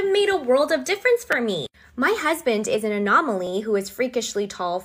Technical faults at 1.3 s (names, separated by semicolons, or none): repeated buffer